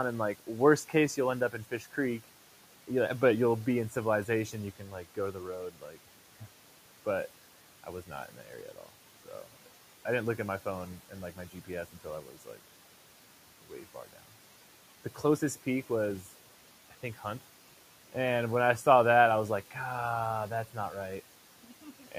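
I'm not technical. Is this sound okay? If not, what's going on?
No. All the way through, the background noise dips whenever there's a pause and creeps back in under the talking. These are noise suppressor artifacts: a cleanup filter keeps judging which parts of the sound are steady noise and turning those down moment by moment, and its constant adjusting is what you hear. It's working against a fairly quiet room noise that sits well below the talking.

In a few places the same filter goes too far: soft consonants and the tails of words come out swallowed or faint. This is speech cut by the noise suppressor, where quiet bits of talking were mistaken for background and lowered along with it. It happens between 0.4 and 2.25 seconds, 4.53 and 6.42, 7.84 and 9.67, 11.09 and 12.6, 13.62 and 14.21, and again right at the end, from 21.63 to 22.13.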